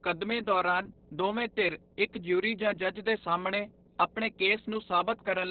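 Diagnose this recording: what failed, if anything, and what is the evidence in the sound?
Mains hum sits under the speech for the whole clip. It is a steady 60 Hz tone, roughly 25 dB below the speech. The fault is in the analogue wiring. A ground loop or a nearby transformer is coupling the power line into the signal.

Opus voice compression damages the speech throughout, and the damage is heavy. Nothing is left above 4.4 kHz, so the speech sounds narrowband and muffled. The coarse SILK coding makes it hoarse and slightly robotic, which points to a very low bitrate near 6 kbps.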